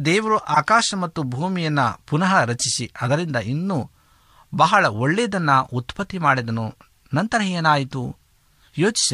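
At 0.54 to 0.59 s and again at 2.59 to 2.64 s, the speech is interrupted by a short chirp, squeak, blip or burst of noise: a corrupt frame decoded. Flipped bits in the compressed stream led the decoder to apply wrong gains or misread codes, placing energy at the wrong frequencies across roughly two frames each time. The first burst is the stronger, the second about 5 dB lower.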